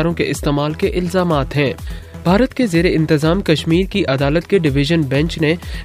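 Nothing stood out on listening; no audible technical fault came through at any point in the clip.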